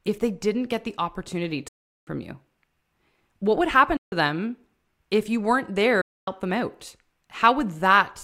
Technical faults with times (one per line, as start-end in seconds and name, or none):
1.68-2.07 Bluetooth dropout
3.97-4.12 Bluetooth dropout
6.01-6.28 Bluetooth dropout